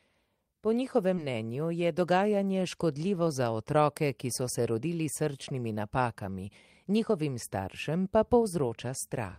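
A brief smear in the speech between 1.15 and 1.19 s is short concealed packet loss: about 20 ms never arrived in time, and the receiver extrapolated the preceding sound to bridge it.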